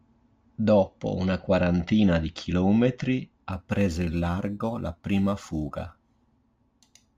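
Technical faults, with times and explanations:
3.52 s to 7.18 s, crude rate conversion: from here to the end the speech picks up a gritty, inharmonic fizz, roughly 35 dB below the signal, that rides on loud and bright sounds. It points to a 44.1 kHz to 48 kHz change made by repeating nearest samples without filtering. Unlike steady hiss, it follows the speech.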